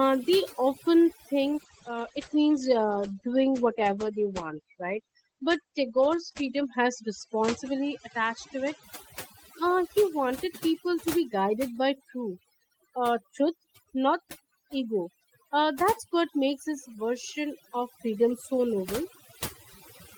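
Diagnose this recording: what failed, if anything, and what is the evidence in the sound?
Overdone noise removal runs the whole way through, and it's a call-processing stage problem. The background sits at near silence but keeps twinkling with little specks. That's a suppressor set far too hard: it pushes individual frequency bands down or off whenever they look like its noise estimate, and the quieter parts of the speech get dragged down with them.

Then there's a call bitrate drop at the codec stage from 1.48 to 8.89 s. The sound goes rough and muffled, with the top end cut from around 20 kHz down to about 8 kHz. It stays at its worst for about 5.2 s before recovering. The degradation suggests the bandwidth estimate fell and Opus was told to work with far fewer bits, roughly 32 kbps down to around 12, so it coded more coarsely and dropped the highs.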